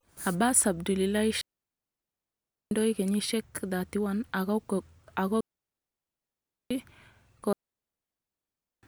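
Digital wireless dropouts occur three times in this speech clip, at 1.41 to 2.71 s, 5.41 to 6.71 s and 7.53 to 8.83 s, each lasting 1.3 seconds. Each time the radio link lost too much data to decode, so the receiver faded its output down almost instantly and held it muted. What you hear is a clean hole of near silence, with no crackle or noise burst before or after it, and the sound simply resumes where the link recovers.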